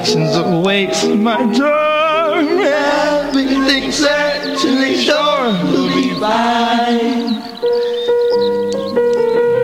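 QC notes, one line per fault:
No faults found in this music clip. There is nothing to log against any time in it.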